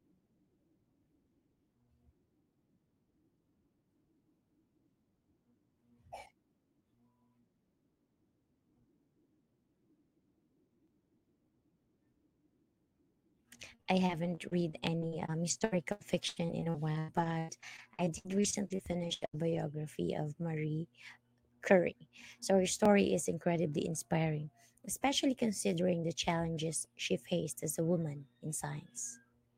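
Speech turns choppy and robotic from 13.65 to 19.64 s, with 32 short holes (the longest 102 ms) papered over by stretching the preceding sound. This is repeated packet loss, with about a fifth of that stretch, roughly a second in total, rebuilt. Tiny skips of a few milliseconds also fall every 4.0 s, at 14.87, 18.86, 22.85 and 26.85 s. These are likely audio missing between chunks, lost each time a 4-second processing block hands over to the next.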